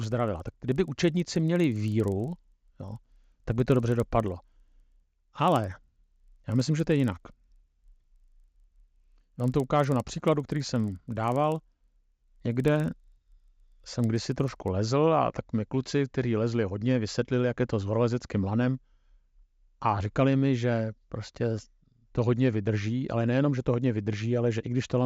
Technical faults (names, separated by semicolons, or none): resampler restarted on every block